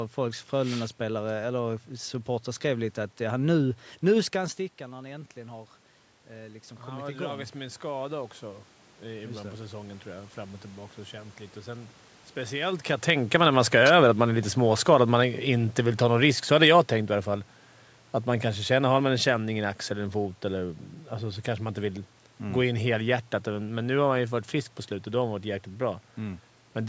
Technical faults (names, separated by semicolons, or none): automatic gain rising; automatic gain falling